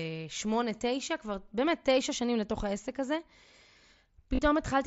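Speech carried over a wideband mSBC Bluetooth headset link, with the 8 kHz ceiling and light graininess that codec leaves, has one instance of concealed Bluetooth headset packet loss from 4.35 to 4.39 s. About 30 ms of audio fits a short run of lost packets, which the receiver filled by repeating the closest-matching recent stretch of waveform. Unlike a plain dropout, which would fall silent, this gap stays at full level as a brief buzzy tone, then warbles slightly as real audio resumes.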